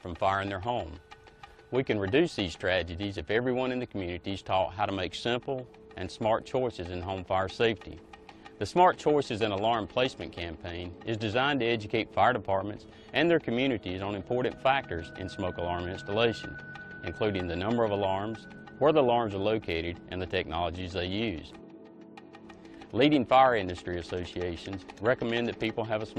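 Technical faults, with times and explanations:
No technical faults are audible anywhere in the audio, and the signal stays continuous and steady throughout.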